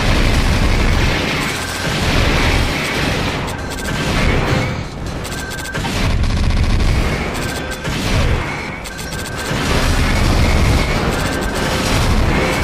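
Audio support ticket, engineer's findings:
Corrupt frame concealed at 5.81–5.86 s, 9.02–9.12 s and 10.83–10.89 s. Events roughly 50 to 110 ms each. Points to a few damaged AAC frames per event. Decoder caught the bad bitstream data and hid each frame itself, muting it or substituting a scrambled copy of the last good spectrum.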